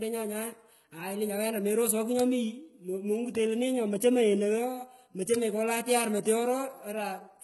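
Throughout the speech, sibilants sound gritty and lispy, and the treble has a synthetic, metallic sheen with nothing above about 11.8 kHz. The likely cause is heavy HE-AAC compression, consistent with a very low bitrate, where replicated upper bands fail to match the real harmonics.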